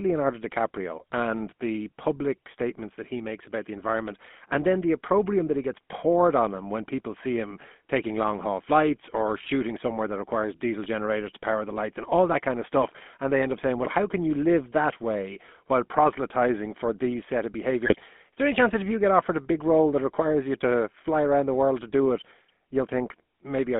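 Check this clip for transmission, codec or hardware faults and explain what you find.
Two faults are present: a codec coloration running through the whole clip, and a short burst of decoder corruption near the end.

Throughout, the speech sounds buzzy and gravelly, confined to a narrow band from about 200 Hz to 3.5 kHz. That is the GSM full-rate codec at work, consistent with a 13 kbps stream. It models the vocal tract and excites it with a coarse, decimated pulse train, which discards much of the natural waveform detail and leaves this plainly audible roughness.

From 17.86 to 18.03 s, between "for these set of" and "there any chance that", the sound briefly breaks into squawks, pops and gargling. These are GSM bit errors: corrupted filter, pitch and gain parameters distort the spectrum and spike the level for each damaged frame. The error rate points to roughly 1.3 percent.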